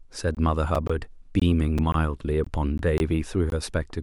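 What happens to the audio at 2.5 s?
Just before that point, from 2.44 to 2.47 s, the speech drops out in a gap between chunks. The audio was carried in blocks of about 0.5 s, and at this join roughly 21 ms of silence was inserted before the next block started, most likely from codec padding or late chunk playback. No speech content is removed. The flow is simply interrupted, and the result is a brief hole in the sound.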